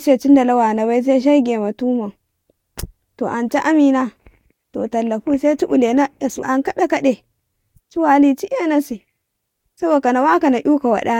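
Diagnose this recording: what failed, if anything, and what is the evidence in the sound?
The fault is at the codec stage: compressed frames skipped at 6.41 s. About two frames, roughly 40 ms of speech, never play, so the sound lurches forward. A spectrogram shows a thin vertical line at the join; the waveform shows a discontinuity.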